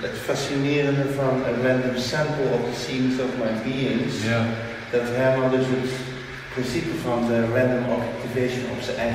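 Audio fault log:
7.99 s, dropped samples: a single sharp click sounds here. A fraction of a millisecond of the stream is likely missing. The waveform leaps from one value straight to a later one. That abrupt step is heard as a click, not as a gap.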